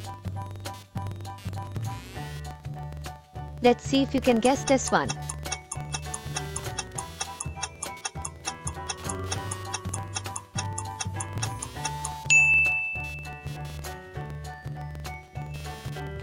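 Computer activity noise runs through the whole clip: a buzzing, scratchy pulse train at roughly 200 pulses per second, sitting about 25 dB below the audio. Processor or peripheral load is modulating the shared ground, so the interference follows machine activity rather than the sound itself.

A filter restarted on every block also persists from start to finish. Each block begins from a zeroed state, leaving a small onset transient that repeats at 21.5 Hz, which fits a 2048-sample block. The result is a low, regular ticking buzz whose strength rises and falls with the signal level.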